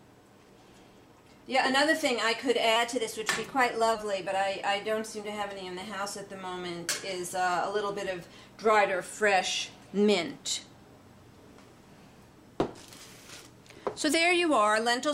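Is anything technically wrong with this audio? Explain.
Yes. From 2.76 to 3.95 s there is a drift correction step. Playback suddenly runs about 5.5% fast, and pitch rises by about 92 cents, just under a semitone. Speed and pitch move together, then snap back at the end. The likely cause is clock-matching software changing the playback rate in one step to drain a filling buffer. The result is an abrupt detuning of the sound for just over a second.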